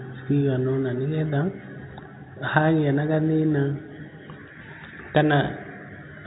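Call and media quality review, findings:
No faults found in the speech recording. The G.711 telephone coding path is audible as the usual narrow telephone band with nothing above 4 kHz, and any quantisation noise riding under the speech is faint.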